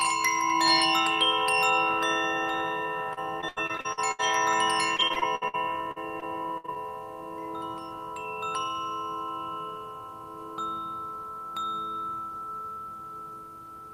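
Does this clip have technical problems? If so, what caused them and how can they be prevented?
Yes. Repeated packet loss (robotic sound) occurs at 3.13–4.21 s, 4.97–5.55 s and 5.91–6.78 s. Gaps up to about 60–80 ms are filled by extending the previous sound, giving choppy audio with pieces missing. A spectrogram shows smeared, repeated frames and abrupt breaks. A steadier network and a larger jitter buffer prevent it.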